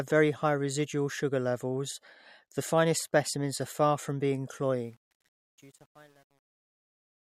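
Speech fading out from 4.75 s to 7.39 s shows truncation distortion on the fade from 4.75 s, gritty between 5.14 and 7.39 s, which fits a 9-bit undithered stage. The waveform collapses into square steps, with broadband hash on the spectrogram.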